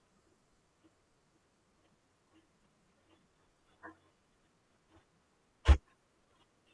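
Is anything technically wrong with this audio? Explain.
No, nothing technically wrong can be heard in this speech recording. No fault turns up at any point in it.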